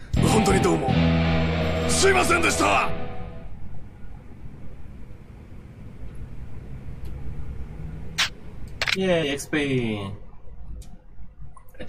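At 5.97 s and again at 9.22 s, a brief glitch breaks the sound. Each is damaged data in a compressed stream. Corrupted bytes made the decoder misread a frame, lose sync, and hunt for the next valid header.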